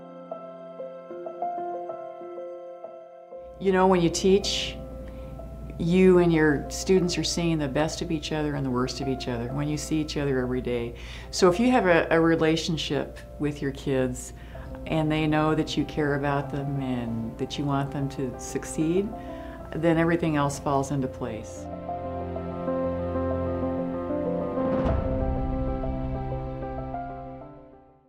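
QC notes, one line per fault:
Nothing to flag here, there's no problem anywhere in the clip worth a line.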